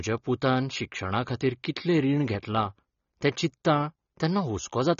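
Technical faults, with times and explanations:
Throughout, AAC compression: nothing above 7 kHz and plainly audible dull, smeared speech, likely from AAC-LC near 24 kbps coarsely quantising spectral detail.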